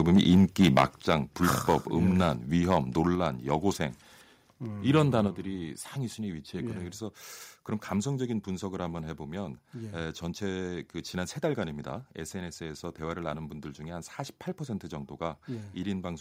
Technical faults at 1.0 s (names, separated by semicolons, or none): microphone overload; microphone volume stepped down